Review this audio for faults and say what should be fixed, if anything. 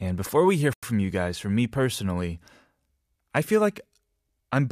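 At 0.73 to 0.83 s, between "before we hear" and "from you guys from", speech drops to silence for 94 ms, then resumes: likely a Bluetooth stall from a drained receive buffer. To prevent it, reduce radio interference or enlarge the playback buffer.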